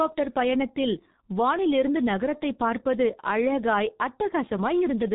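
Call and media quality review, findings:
G.723.1 codec damage throughout speech: muffled, hoarse, smeared consonants. Spectrogram shows hard ceiling near 3.8 kHz; heavy low-rate coding, fits roughly 6.3 kbit/s, 30 ms frame modelling.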